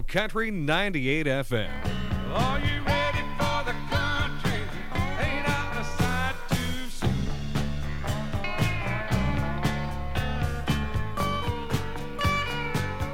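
No technical fault can be heard anywhere in this audio. There is nothing here that needs a time or a cause.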